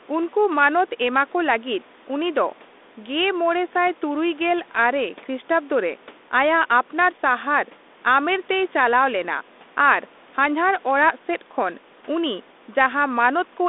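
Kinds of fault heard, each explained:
No faults heard in this clip.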